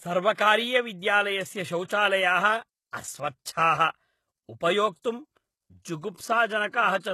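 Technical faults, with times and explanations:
Throughout, HE-AAC compression: The speech is plainly damaged by coding, and nothing is heard above 12.3 kHz. The s sounds turn gritty and lispy. The likely cause is HE-AAC at a low bitrate, around 16 kbps, which rebuilds the treble from copied lower bands whose harmonics do not line up.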